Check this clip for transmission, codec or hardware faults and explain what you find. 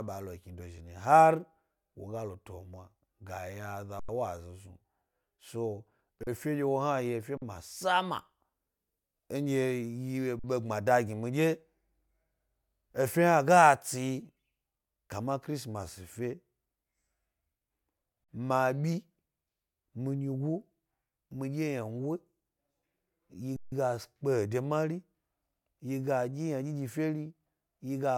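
The speech halts six times, sound freezing flat, then picking up softly: 3.99 to 4.09 s, 6.23 to 6.27 s, 7.37 to 7.42 s, 10.39 to 10.44 s, 18.24 to 18.29 s and 23.56 to 23.72 s. This is an underrun with held sample. The output buffer emptied and the converter held its last value until data arrived. Nothing was lost, so playback resumes where it paused, softly. Pauses of 2048 and 4096 samples fit whole-buffer stalls.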